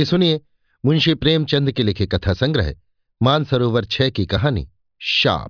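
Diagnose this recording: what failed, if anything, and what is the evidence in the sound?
Nothing failed at any stage of the chain here: the speech signal arrives intact and continuous, with no audible defect introduced by wiring, conversion, buffering, processing, transmission, storage or playback.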